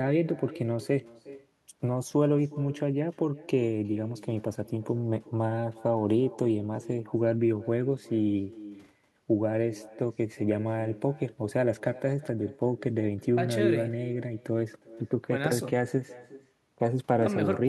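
Speech with echo with no canceller running through the whole clip: each phrase returns roughly 0.4 s later at about 20 dB below the direct sound, a thinner copy. The far end is playing the call through a loudspeaker, its microphone is picking it up, and no echo canceller is removing it before the network round trip.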